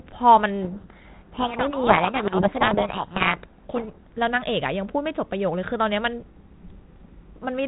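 From 0.62 to 4.08 s, a codec payload misread buries the speech in harsh distortion, because the decoder unpacks the G.726 code words in the wrong bit order.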